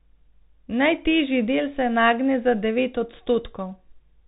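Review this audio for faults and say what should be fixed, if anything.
Bluetooth CVSD headset codec damage runs through the whole speech clip. The encoder sends only one up-or-down bit per step and adapts its step size, so loud, fast-rising sounds outrun it and distort, s sounds turn scratchy, and a granular hiss sits beneath everything, which fits a 64 kbit/s CVSD link. On a spectrogram, energy stops flat at 4 kHz, with a grainy noise floor between syllables. The waveform shows sloped, slew-limited edges on sharp transients. Prevent it by recording through a wired microphone or a wideband Bluetooth profile instead of the headset's narrowband call mode.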